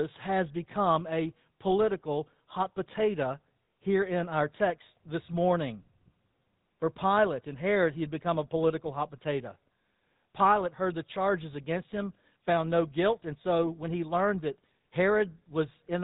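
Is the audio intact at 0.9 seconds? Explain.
No. At 0.9 seconds, as across the whole recording, the speech carries GSM full-rate codec damage. The codec rebuilds the voice from a vocal-tract model fed by a sparse, regularly spaced pulse train, which gives the plainly audible buzzy, gravelly roughness heard here, consistent with the 13 kbps GSM rate. On a spectrogram, energy stops at a flat ceiling near 3.8 kHz, with harmonics looking smeared and grainy beneath it.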